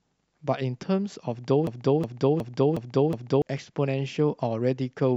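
At 1.67 s the speech locks into a broken-record loop. A 365 ms fragment plays five times, back to back, until 3.42 s. Each pass is identical. The speech that belonged there never arrives. A stalled player or stream resending its last buffer is the likely cause.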